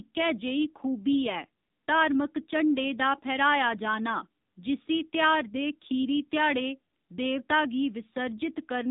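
AMR narrowband mobile codec damage runs through the whole recording, from start to finish. The speech has been squeezed through a phone-network coder that samples at 8 kHz and rebuilds each 20 ms frame from a vocal-tract model excited by a handful of pulses. Nothing above about 3.8 kHz survives, so sibilants lose their edge, and the plainly audible buzzy, synthetic quality fits one of the lower modes, around 7.4 kbps.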